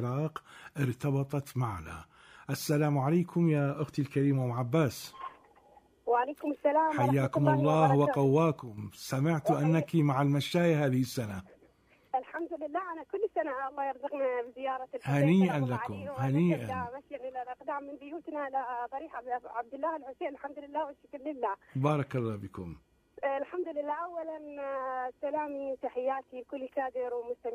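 At 8.59 s the level drops abruptly by about 9 dB, and it stays down until 8.78 s before coming back. It's a sudden gain jump: the sound and the background noise fall together in a single step, with no fade in or out. The likely cause is a digital gain change applied from one sample to the next without any ramp, such as a setting change or a bit shift taking effect instantly.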